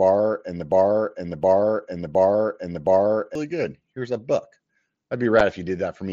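Speech carried over a wideband mSBC Bluetooth headset link, with two separate faults. Right after "and the", from 0.72 s to 3.35 s, a broken-record loop takes over. A 0.72 s fragment plays four times, back to back and identical, so whatever should have been said in those seconds never arrives. The likely cause is a stalled player or stream resending its last buffer. Unlike a stutter or an echo, each pass is an exact copy with no decay. At 5.40 s there is unconcealed Bluetooth headset packet loss. A hole of about 7.5 ms, which fits a single dropped voice packet, cuts into the speech with hard edges. This is different from the mSBC codec's own light graininess and flickering upper bands, which are spread through the clip rather than appearing as one sudden gap.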